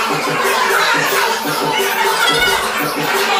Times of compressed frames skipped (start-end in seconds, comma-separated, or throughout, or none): none